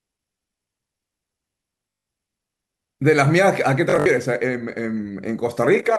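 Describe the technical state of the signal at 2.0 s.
At 2.0 s the speech hits a Bluetooth stutter (1.90–2.06 s): about 160 ms of lost data replaced by a repeating slice, heard as a buzz and seen as identical repeated waveform cycles and vertical spectrogram striping.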